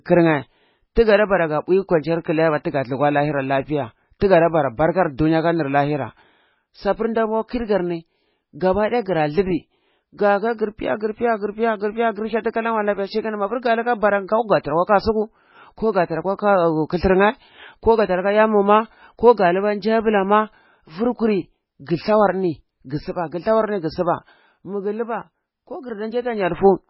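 Throughout the speech the sound is dull and watery, with nothing above about 5.5 kHz, a swirling quality, and smeared consonant attacks. The likely cause is heavy MP3 compression at a very low bitrate, around 16 kbps. Starved of bits, the encoder chops off the treble at a fixed point and discards weak frequency components, which flicker in and out between frames and produce that underwater texture.

At 0.95 s and again at 4.19 s, a brief hiss arrives just ahead of a sharp onset, about 13 ms and 19 ms long respectively, and the attack itself sounds softened. This is pre-echo. The codec spreads its quantisation noise across an entire block, so when a loud transient lands late in that block, noise scaled to the loud part leaks backward into the quiet moment before it.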